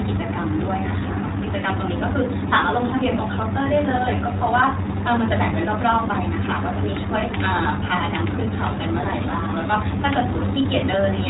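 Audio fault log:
throughout, iLBC codec: nothing above 4 kHz, speech plainly rough and synthetic from independently coded frame excitation, which fits 20 ms frames at about 15 kbps.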